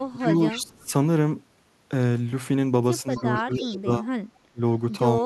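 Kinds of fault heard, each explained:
Echo leak: from 0.0 to 0.89 s and from 3.11 to 3.76 s, a faint delayed copy of the speech trails it by 270 ms, about 20 dB below the direct sound, with a brief, much weaker scrap near 4.35 s at about 40 dB down. The likely cause is a loudspeaker at the far end whose echo canceller let part of the returning signal through, so the speech comes back late.
Speech suppressed in double talk: at 0.11 to 0.34 s, 0.52 to 0.91 s, 3.03 to 4.08 s, 4.52 to 4.61 s and 5.21 to 5.25 s the speech dips in level, by roughly 15 dB in some spots and up to about 25 dB in others, sounding pulled down or partly cut. This is likely an echo canceller that, faced with both sides at once, could not tell live speech from echo and attenuated everything together.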